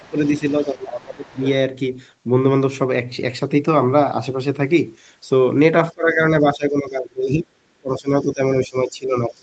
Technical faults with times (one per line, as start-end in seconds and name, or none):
0.00-1.44 speech suppressed in double talk
0.06-0.66 other side's voice leaking through
1.37-1.51 other side's voice leaking through
5.92-7.55 speech suppressed in double talk
7.80-9.42 speech suppressed in double talk
9.16-9.34 other side's voice leaking through